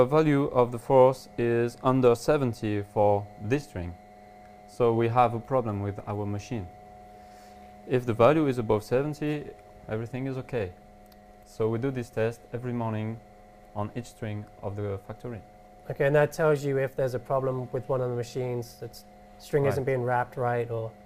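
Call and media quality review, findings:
Nothing here to flag; the audio holds steady throughout, with no dropouts, glitches or level jumps to report.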